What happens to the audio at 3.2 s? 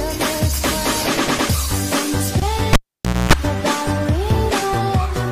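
At 3.2 s you're in the middle of a cable pulled and plugged in, from 2.73 to 3.33 s: a pop, about half a second of near silence, then 60 Hz buzz while the plug tip makes contact.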